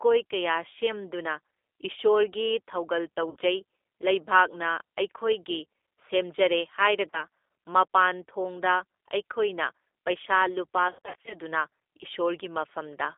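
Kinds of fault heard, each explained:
G.729 codec: Throughout, the speech sounds slightly rough and synthetic, with a narrow telephone band running from about 300 Hz to 3.6 kHz and nothing above it. The coding damage is plainly audible, which fits an 8 kbit/s G.729A stream. This codec does not store the waveform. It rebuilds each 10 ms frame from a vocal-tract filter, a pitch predictor and a few pulses, so fine detail is replaced by a rough approximation.
VoIP packet loss concealment by the speech codec: Three times the speech turns into a stretched, buzzy or smeared sound that fades and then recovers weakly. This happens at 3.30–3.36 s just after "ꯀꯌꯥ ꯁꯦꯝꯗꯨꯅ ꯏꯁꯣꯔꯒꯤ ꯊꯧꯒꯜ", at 7.10–7.23 s, and over 10.89–11.34 s, where gaps totalling about 260 ms are scattered across that span and the longest runs 80 ms. The decoder fills missing packets by extending its last pitch and filter at falling gain.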